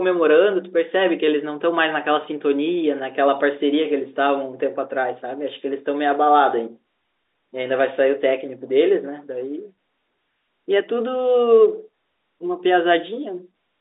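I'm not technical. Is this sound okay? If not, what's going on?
Yes, this speech recording is technically sound: it has the narrower, slightly boxy sound of an ordinary landline telephone call, and nothing in it points to a fault.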